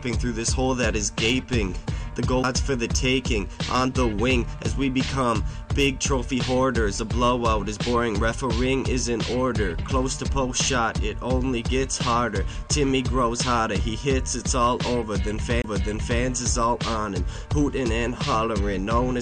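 The audio has two CD skips, at 2.43 s and from 15.62 to 15.64 s. At each, the laser jumps to another turn of the disc's spiral after a knock or surface flaw, so playback mutes very briefly (a few milliseconds at the first, about 20 ms at the second) and resumes from a different point. The tick plus the displaced continuation sets a skip apart from a plain dropout, which resumes where it left off.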